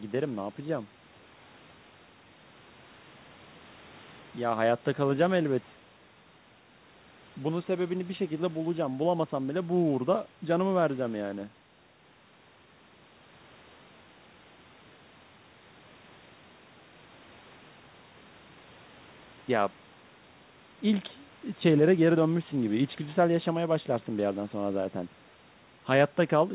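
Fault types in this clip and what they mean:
There are no fault types in this clip, so none have a meaning to explain.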